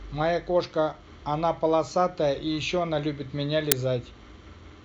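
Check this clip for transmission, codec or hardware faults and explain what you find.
One fault is present: an uninitialised buffer at 3.72 s. A block of about 5 ms was sent to the output before any audio had been written into it, so whatever values were left over in that memory were played out as if they were samples. Because those values bear no relation to the speech around them, the result is a brief, loud crack cutting abruptly into the speech.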